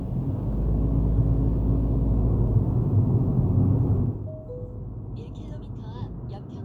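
Nothing technical goes wrong in this recording of sounds, so there's no fault to point to anywhere along it.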